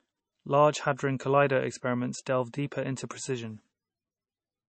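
Throughout, the speech shows MP3 compression, likely from an encoder starved of bits, consistent with a rate near 28 kbps. It removed everything above 8.4 kHz and zeroed weak frequency lines frame by frame, so the audio sounds dull, watery and swirly, with plainly audible smeared consonants.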